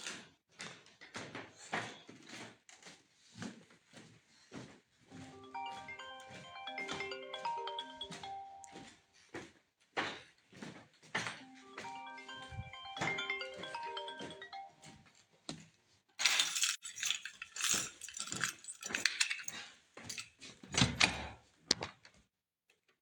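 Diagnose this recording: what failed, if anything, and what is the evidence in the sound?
The failure is in the codec: AAC frame loss with muting. From 16.73 to 16.84 s the sound fades into a short silence and fades back out of it. The hole is about 85 ms long, which fits two lost AAC frames whose spectrum the decoder zeroed. Its overlapping windows soften both edges, unlike a hard sample dropout.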